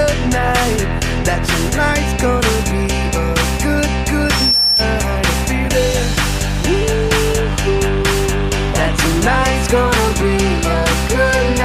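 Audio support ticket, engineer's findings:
Loudspeaker feedback squeal, 4.24 to 4.86 s. Single 5.4 kHz tone swelling over about a third of a second to a few dB above the programme. Probable component: mic-to-speaker acoustic path. Loop gain exceeded unity at 5.4 kHz, so that frequency regenerated itself. Check mic placement and monitor gain, and notch around 5.4 kHz.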